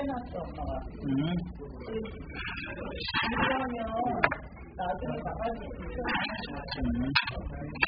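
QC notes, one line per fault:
throughout AAC compression: dull, smeared, warbling sound with nothing above 5 kHz, likely from heavy AAC-LC coding at a bitrate near 8 kbps.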